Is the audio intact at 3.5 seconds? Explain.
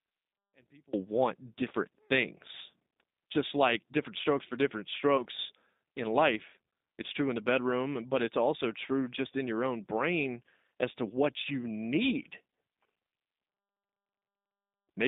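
No. At 3.5 seconds the speech carries G.729 codec damage, present throughout: rebuilt from pitch and pulse models within 200 Hz to 3.7 kHz, it sounds rough and synthetic, not merely muffled like plain telephone band-limiting.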